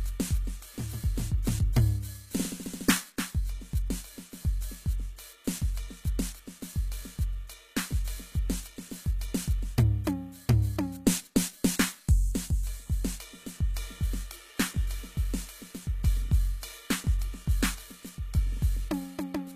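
Throughout the music, the top end sounds bright but synthetic: cymbals and other high, noisy parts turn gritty and metallic, with a smeared, lispy sheen, and nothing at all is present above 14.9 kHz. The likely cause is HE-AAC compression at a bitrate that points to roughly 20 kbps. The treble is rebuilt by copying lower bands upward rather than coded directly, so its harmonics no longer match the music below the crossover.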